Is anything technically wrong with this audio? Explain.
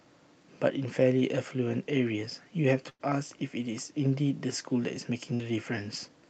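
Yes. There is a burst of packet loss at 2.89 to 3.11 s and 5.34 to 5.43 s. About 100 ms and 60 ms of speech went missing, and the receiver stretched the last sound over the gaps, fading it down. This gives a brief buzz or hiss, a smeared, repeating spectrogram band, then an abrupt jump.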